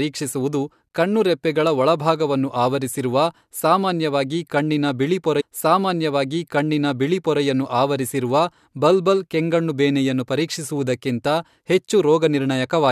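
At 5.40 s the player queued the same stream segment twice, so about 2.0 s of speech replays until 7.40 s, with a small blip at the jump back.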